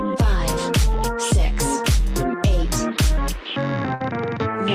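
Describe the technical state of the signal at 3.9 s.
At 3.94 s the sound stops moving forward: the last fragment is stretched into a held, steadily fading sound for about 56 ms, and at 4.02 s the audio picks up again, roughly 60 ms of material simply gone. This is a burst of packet loss. Several consecutive packets never arrived in time, so the receiver extended and faded what it last had, then resumed later in the stream.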